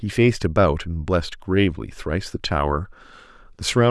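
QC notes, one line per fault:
No faults found on this speech take.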